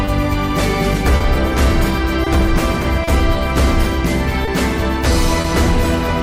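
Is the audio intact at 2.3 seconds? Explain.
No. A short stall from a late packet runs from 2.24 to 2.28 s. The packet arrived late, so the receiver stretched the last sound by 20 ms, holding it slightly too long. Clock drift between sender and receiver also runs through the whole clip, with the sender's clock about 2 percent slow. The draining buffer causes small repeated timing hiccups.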